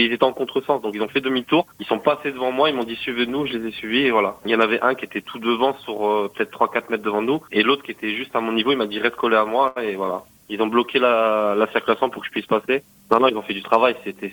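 At 9.67 s, a short stall from a late packet stretches the sound for 84 ms, then resumes where it paused. Unlike packet loss, nothing is skipped.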